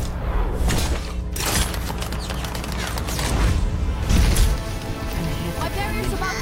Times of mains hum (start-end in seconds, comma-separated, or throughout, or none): 0.00-4.31